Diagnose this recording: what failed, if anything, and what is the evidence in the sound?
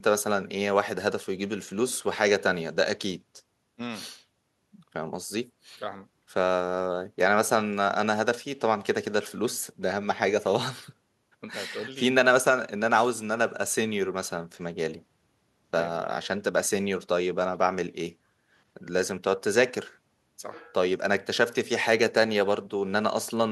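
No audible faults detected.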